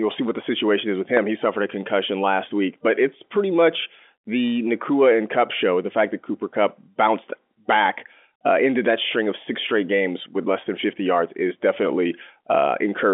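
At 1.17 to 1.19 s, right after "the situation is with", a single sharp loud pop cuts in, peaking around ten decibels above the speech, which carries on underneath. The likely cause is a sudden voltage step, such as a plug, switch or static discharge, added to the telephone-band signal.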